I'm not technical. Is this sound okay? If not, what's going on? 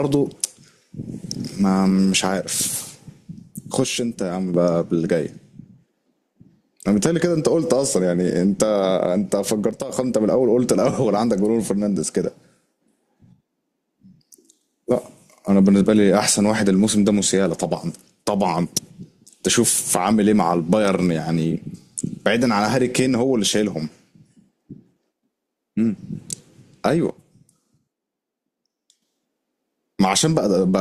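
No. The speech abruptly turns quieter from 3.84 to 4.54 s, 9.71 to 9.89 s and 27.10 to 29.02 s, likely because one channel drops out.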